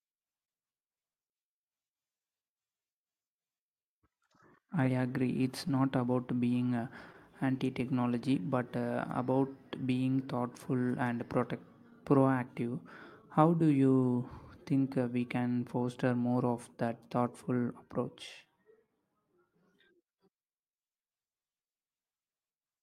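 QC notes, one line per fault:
throughout: clock drift between sender and receiver. The sender's clock runs roughly two percent slow, so the receiver keeps stretching the speech. Waveform shows small irregular seams.
1.68–22.55 s: repeated timing corrections. Short repeated slices slow the speech to 99% speed, adding roughly 300 ms in total. Spectrograms show duplicated frames at uneven spacing.
5.68–7.61 s, 11.38–15.64 s, 17.46–19.91 s: scattered short gaps. A handful of lost packets, each around 10–15 ms, are patched by extending the previous sound, giving brief smears. Each shows as a short smeared stretch on the spectrogram.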